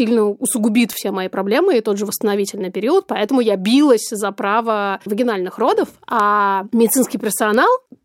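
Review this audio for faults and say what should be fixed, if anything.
Bit error spikes at 0.93 s, 6.20 s and 7.54 s: three isolated ticks, peaking at about -2 dBFS, -8 dBFS and -14 dBFS. Each fits a flipped bit throwing one to three samples up by a power of two before snapping back, so the click is broadband and ignores the speech. Storing and moving the audio over error-checked memory and links, with checksums on transfers, would stop these corruptions.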